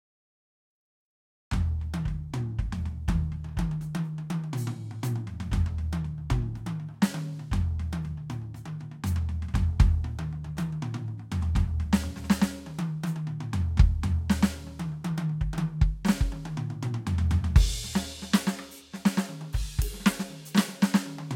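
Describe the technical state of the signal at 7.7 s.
At 7.7 s the music plays through intact, with no dropout, click, distortion or other audible fault at that point.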